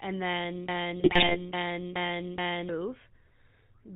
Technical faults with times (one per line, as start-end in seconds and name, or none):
0.00-3.95 GSM full-rate codec
0.69-2.69 broken-record loop
1.00-1.37 GSM bit errors